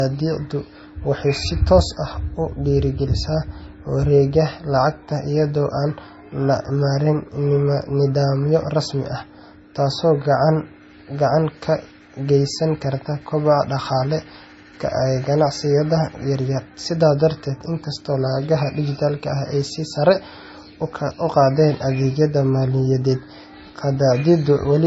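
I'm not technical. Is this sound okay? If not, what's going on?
No. The problem is low-bitrate audio saved at a high bitrate, and it runs from start to finish. Nothing is heard above about 7.6 kHz, so the speech sounds dull and muffled, without crispness on sounds like s and t. This is likely because the recording was squeezed hard into a small MP3 file at some point and later saved again as a large, high-quality file. Saving it bigger can't bring back the detail the first squeeze removed.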